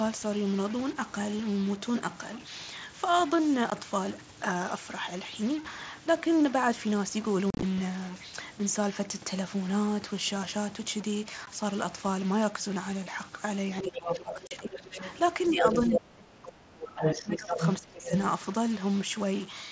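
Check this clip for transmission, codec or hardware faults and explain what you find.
Four kinds of fault are audible in this speech recording.

Stuck bit, throughout: one data bit is likely stuck at a fixed value, throwing samples off by its weight. This adds distortion and fills pauses with noise.

Unconcealed Bluetooth headset packet loss at 3.7, 7.50 to 7.63, 11.46 and 14.47 to 14.51 s: dropped headset packets were replaced by silence or an idle pattern. Each leaves an abrupt hole. Around 7.5 s, 90 ms is lost across 120 ms, which sounds chopped.

Other side's voice leaking through, from 13.78 to 16.0, 16.85 to 17.7 and 18.05 to 18.18 s: the echo canceller likely left the far end's loudspeaker sound in the microphone. A second voice comes through about as loud as the talker.

Speech suppressed in double talk, from 13.82 to 15.01 s and from 15.5 to 18.11 s: with both sides talking, the canceller likely turned the talker down as well. 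The voice dips by roughly 15 dB in the first stretch and by up to about 30 dB in the second.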